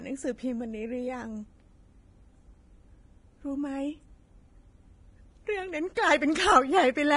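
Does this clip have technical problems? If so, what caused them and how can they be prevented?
Yes. Throughout the speech, the encoding was likely heavy, low-quality Vorbis compression at a bitrate that sounds close to 27 kbps. Its lowered cut-off removes everything above 10.6 kHz, and coarse quantisation turns the remaining treble detail into grainy hiss, roughening the speech and softening consonant attacks. Encoding at a higher quality setting would prevent it.

At 5.95 s, pre-echo occurs because a sharp onset lands late in a transform block, so quantisation noise sized for the loud attack spreads backward into the quiet gap before it. A short hiss of about 18 ms precedes the attack, which sounds smeared. More bits or an encoder with better transient handling would prevent this.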